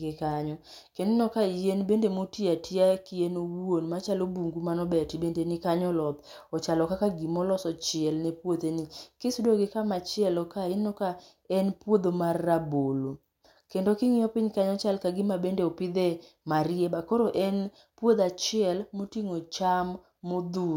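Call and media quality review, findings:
No faults found in the speech audio. Nothing to escalate on this ticket from listening.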